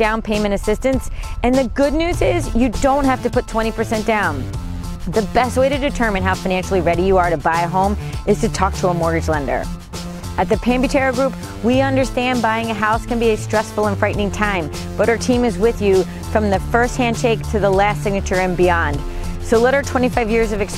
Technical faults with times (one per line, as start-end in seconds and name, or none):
none